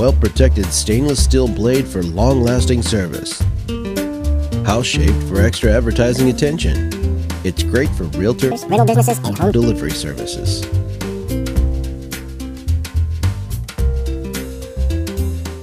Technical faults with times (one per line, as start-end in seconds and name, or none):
8.51-9.52 section at the wrong speed